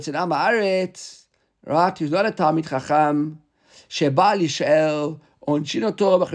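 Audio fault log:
No faults detected in this recording.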